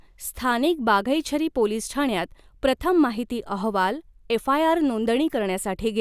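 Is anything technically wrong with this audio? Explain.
No, the signal shows no technical problems anywhere in the recording.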